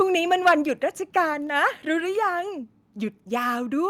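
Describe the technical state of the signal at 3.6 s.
At 3.6 s the speech signal is intact, with no audible fault at that moment.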